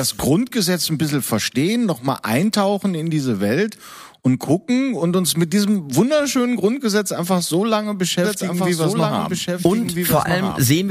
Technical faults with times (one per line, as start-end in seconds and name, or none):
8.24-10.90 doubled audio track